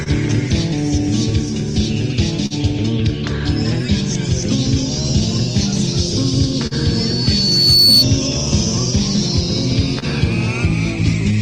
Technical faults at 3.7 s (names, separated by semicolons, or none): clock drift between sender and receiver